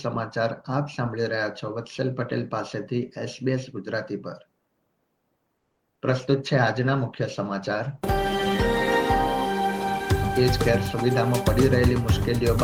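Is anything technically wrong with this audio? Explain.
Yes, there are three call-transport faults close together in the middle of the clip.

From 5.57 to 5.81 s there is a call audio freeze. Packets were likely held up in transit so that the jitter buffer ran dry. The receiver had nothing to play, and the audio drops to silence for about 220 ms. When playback resumes it picks up exactly where it stopped, so nothing is lost. A pause has simply been inserted, and everything after it is pushed later by that amount.

Between 5.95 and 5.99 s comes a short concealed packet loss. About 20 ms of audio never reached the decoder in time, so the receiver invented a stand-in by extending the preceding sound and then crossfading into the real signal. This leaves a brief smear or wobble right after the freeze. The 20 ms that was replaced is gone for good.

From 6.08 to 9.69 s there is a call bitrate drop. 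The bandwidth estimate fell and the encoder was pushed from 32 kbps down to 18 kbps, where it stayed for roughly 2.5 s at its lowest. With fewer bits, the codec quantises more coarsely and trims the upper frequencies. The sound becomes duller and rough or watery until the rate climbs back.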